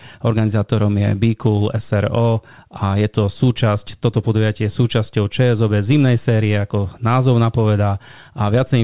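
Speech carried over a call path whose band stops at 4 kHz, consistent with a narrowband G.711 mu-law link at 64 kbps, with no technical fault audible anywhere in the recording.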